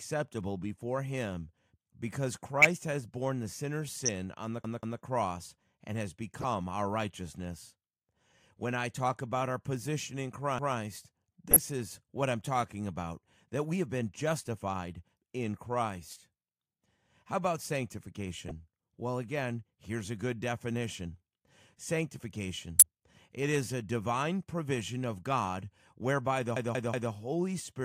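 A corrupt frame decoded at 2.58–2.77 s, and again at 4.06–4.09 s, throws misplaced energy into brief chirps and noise bursts, each lasting only as long as the damaged frames. From 4.64 to 5.02 s a repeated buffer plays the same roughly 186 ms piece two extra times, which fits an 8192-sample buffer. This is a stutter with hard joins, not a squeak. Corrupt frames return at 6.41–6.44 s. Another single repeat follows at 10.59–10.77 s. Further corrupt-frame blips fall at 11.51–11.59, 16.11–16.16, 18.48–18.51 and 22.79–22.86 s. The last repeated buffer, at 26.56–27.12 s, stutters three extra times.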